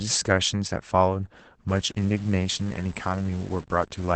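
The clip is speech carrying Opus voice compression throughout: the band stops cleanly at 8.7 kHz, and the voice sounds muffled, hoarse and faintly robotic. That fits the SILK coder running in wideband mode at roughly 12 kbps. Unlike plain low-pass filtering, the coarse excitation coding also roughens the voice itself. From 1.69 s to the end a grainy, signal-following distortion appears, sitting around 25 dB below the speech. That is likely low bit depth without dither, pointing to truncation to about 7 bits. Steady hiss would stay constant, but this grit rises and falls with the sound.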